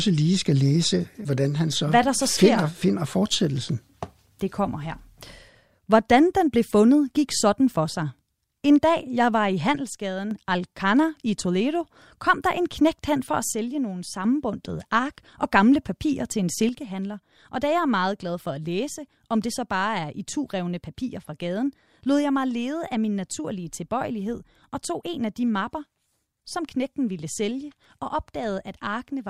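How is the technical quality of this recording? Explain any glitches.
The recording has level drops in three places. From 9.76 to 10.31 s, 13.52 to 14.24 s, and 16.69 s to the end, the speech suddenly falls about 6 dB. The likely cause is one channel drops out: with one stereo side lost, the mono sum keeps only half the shared signal.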